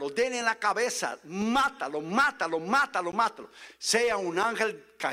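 At 3.12 s, the sound stops dead for about 13 ms and then resumes. This is a gap between stream segments. The audio arrives in segments of about 2 s, and the time stamps of two adjacent segments fail to meet. The player fills the empty stretch with silence. Both edges of the hole are hard, so it comes across as a brief click-like dropout. Nothing is missing from the audio. The silence is simply inserted between the two segments.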